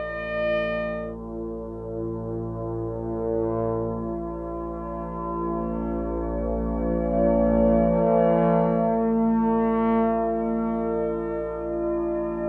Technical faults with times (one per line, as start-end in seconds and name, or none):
none